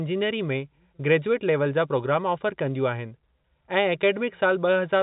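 Nothing faulty can be heard anywhere in this speech.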